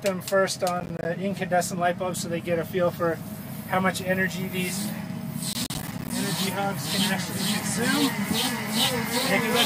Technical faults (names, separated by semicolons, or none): processor overload crackle